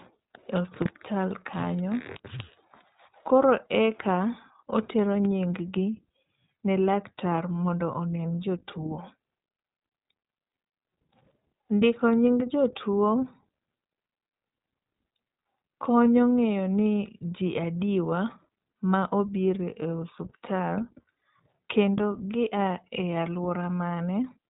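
iLBC codec coding runs throughout the speech. The band stops at 3.8 kHz, and each short frame's excitation is rebuilt on its own without reference to the previous one, giving a plainly audible rough, slightly synthetic edge. This fits 20 ms frames at 15.2 kbps.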